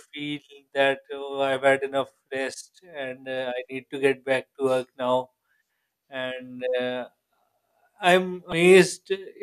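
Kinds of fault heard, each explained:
Damaged data in a compressed stream: from 8.50 to 8.53 s, near the end of the speech, a glitch about 30 ms long interrupts the sound. Part of the encoded stream at that point is corrupted, so the decoder misreads the affected frames, loses its place and has to hunt for the next valid frame header before normal playback resumes. The brief glitch is the result.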